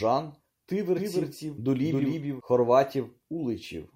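From 0.97 s to 2.41 s the speech carries a doubled audio track: a second full-band copy trails the original by about a third of a second, somewhat quieter. It is likely captured again through a slower path. Unlike a room echo or reverb, this copy has no decaying tail and no room colouring, a single clean repeat at a fixed lag, and it switches on and off abruptly at those two points.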